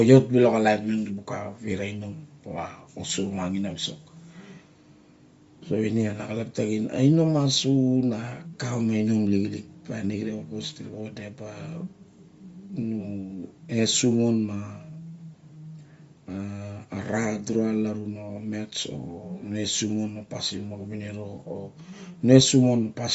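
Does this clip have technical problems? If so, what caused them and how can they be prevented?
Yes. Throughout the speech, the sound is band-limited, with nothing above about 7.7 kHz. The upper range has a breathy, grainy texture, and the codec damage is plainly audible. The likely cause is Bluetooth LC3 compression. At a low bitrate, the encoder discards much of the upper spectrum and substitutes shaped noise. The damage and the cut-off fit roughly 32 kbps with 10 ms frames. To prevent it, record through a wired or local microphone rather than a Bluetooth headset link, or configure LC3 at a higher bitrate and sample rate.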